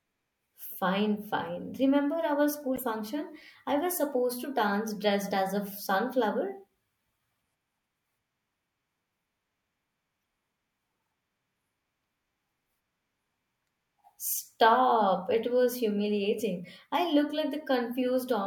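At 2.75 to 2.81 s in the speech, a corrupt frame decoded: flipped bits across a few frames send energy to wrong frequencies, giving a brief chirpy burst peaking around -25 dBFS.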